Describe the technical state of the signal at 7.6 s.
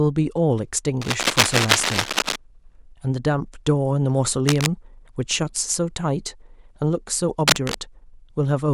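Around 7.6 s there's a burst of cable scratch noise, running from 7.48 to 7.75 s. It sounds like rough scratchy rustling laid over the speech at roughly the same loudness. It's likely a worn cable or connector shifting and rapidly changing its contact resistance.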